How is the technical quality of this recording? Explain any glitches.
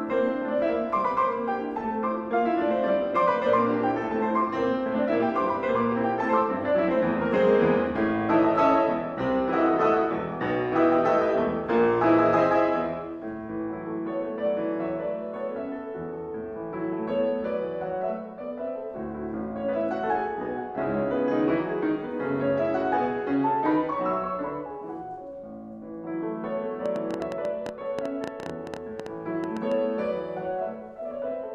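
The recording has one clear glitch near the end. From 26.86 to 29.73 s there is a train of clicks: around thirty sharp, similar pulses at an uneven pace averaging 8.4 per second, peaking roughly 10 dB above the sound and audible as ticking throughout. The likely cause is electrical interference or a faulty connection or power supply injecting repeated impulses.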